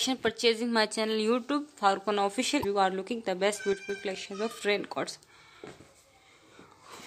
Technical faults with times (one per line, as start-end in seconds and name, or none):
2.61-2.65 damaged data in a compressed stream
3.73-3.89 one channel drops out